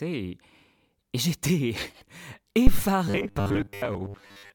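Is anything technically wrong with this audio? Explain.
Yes, two problems. At 2.67 to 2.86 s there's a phantom power thump: a supply switched on or off on the live input pushes a step through the coupling capacitors, giving a deep thud that dies away in about 43 ms. Then from 3.08 to 4.54 s you get robotic sound from repeated short buffers. It's likely starved input being padded by looping roughly 10 ms chunks, which turns the speech into a rigid, metallic 100 Hz buzz for most of that stretch.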